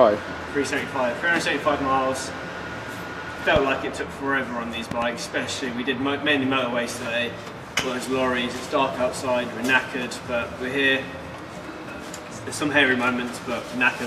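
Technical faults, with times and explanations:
3.56–3.58 s, 4.91–5.04 s and 7.79–7.82 s: loud pops. The first two are sharp pops about 15 dB above the sound, and the last is about 20 dB. The middle one is a double pop. The sound continues underneath. A sudden voltage step, from static or a switch, is the likely cause.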